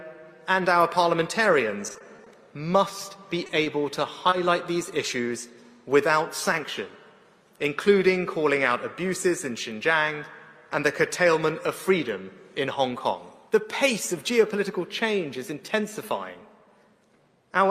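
From 1.87 to 2.28 s there's repeated packet loss, five short gaps patched by stretching the last sound, giving a choppy, robotic stretch with bits missing. At 3.47 s comes a short stall from a late packet: the buffer ran dry, so a sound hangs on about 20 ms longer, then picks up where it left off. Right after, at 3.64 s, a short concealed packet loss fills a 20 ms hole with a continuation of what came before, heard as a brief smear. Another stall like the first one turns up at 4.30 s.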